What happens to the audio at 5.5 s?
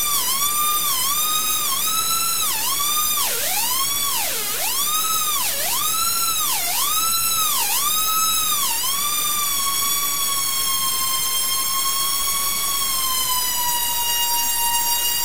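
Low bit depth without dither runs through the whole clip, including 5.5 s: likely truncation to about 4 bits, leaving grainy, signal-following distortion only about 10 dB below the sound.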